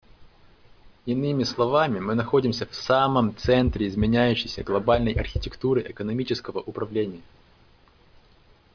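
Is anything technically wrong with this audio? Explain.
No, nothing technical stands out here; the speech sounds fine all the way along.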